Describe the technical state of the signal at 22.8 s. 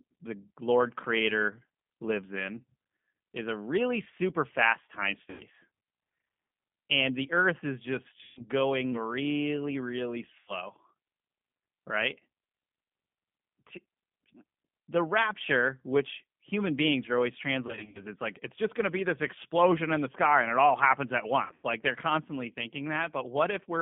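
At 22.8 s the speech carries G.729 codec damage, present throughout the clip. The narrow 150 Hz to 3.5 kHz band and the buzzy, synthetic roughness of speech rebuilt from a filter, pitch predictor and sparse pulses fit an 8 kbit/s G.729A link.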